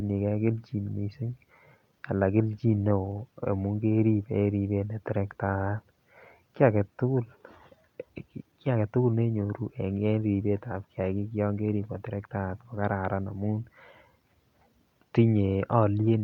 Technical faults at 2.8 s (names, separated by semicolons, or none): scattered short gaps